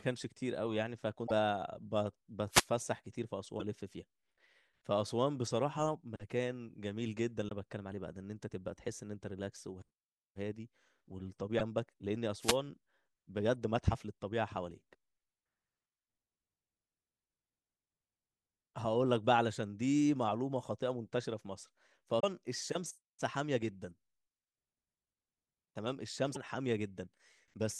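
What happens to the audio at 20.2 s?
Nothing goes wrong at 20.2 s; the speech there plays through intact, with no dropout, click, distortion or other fault.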